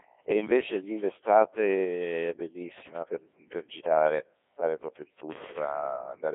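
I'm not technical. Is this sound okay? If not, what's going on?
No. The speech passes through a Codec 2 vocoder throughout: it's rebuilt from buzzy synthetic tones, so it sounds robotic, not just muffled and phone-narrow like an ordinary telephone line.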